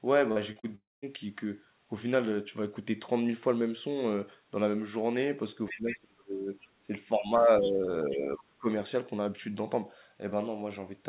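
Right at the start there's short concealed packet loss at 0.32, 0.52 and 0.60 s. Each time about 40 ms of audio went missing and the decoder patched it by extending the preceding sound, so you get three quick smears in a row.

Straight after, from 0.75 to 1.05 s, comes what's likely a long network dropout. Roughly 0.3 s never arrived. The fill starts as a continuation of the last sound, fades to near silence, and then the speech resumes with that stretch simply gone.

Around 5.68 to 5.98 s a second voice comes through underneath, about 10 dB below the talker, and again briefly at 7.60 to 7.71 s, about 15 dB down. That's likely the other side's voice leaking through from the loudspeaker, which the echo canceller didn't fully remove.

Overlapping that, there's what's likely speech suppressed in double talk. The talker's level dips hard from 5.71 to 6.50 s, at worst by around 30 dB. It dips again from 6.80 to 6.91 s and from 8.09 to 8.67 s by around 15 dB, and from 7.19 to 7.88 s by around 10 dB. 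It sounds like the voice ducking and chopping while both sides talk at once.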